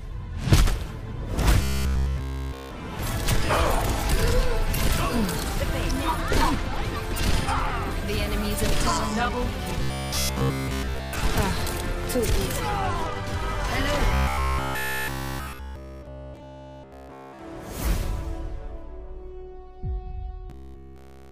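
From 1.63 to 2.71 s, 9.83 to 11.13 s, 14.14 to 17.39 s and 20.50 to 21.31 s, the sound turns into a rigid metallic buzz at 66.7 Hz: robotic sound, likely from a short buffer of about 15 ms being replayed over and over while essentially all the real audio is skipped.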